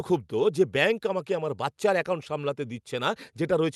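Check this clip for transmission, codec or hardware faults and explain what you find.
Nothing stood out on listening to this speech, which sounds as expected for audio carried over a WebRTC call path using the Opus codec.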